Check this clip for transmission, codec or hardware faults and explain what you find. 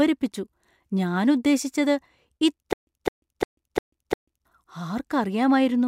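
There is one clear fault, a stutter with silent gaps, from 2.73 s to 4.45 s. A short burst of the speech, about 209 ms long, plays again and again, five times, each followed by roughly 142 ms of dead digital silence, so it pulses at an even 351 ms period. The likely cause is a stalled stream or player that replayed its last buffered fragment at each retry and then ran dry, losing the speech that belonged in that stretch.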